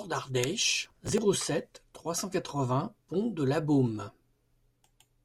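A speech recording with a burst of processor overload crackle from 0.85 to 1.18 s, ending just before "sept trois cent". For about a third of a second, the processor could not fill its short audio buffers, of the order of 5 ms each, in time. Dozens of deadlines were missed in quick succession, and each missed buffer was skipped, leaving a hard-edged gap. The rapid chain of gaps is heard as gritty tearing over the speech, stopping once the load clears.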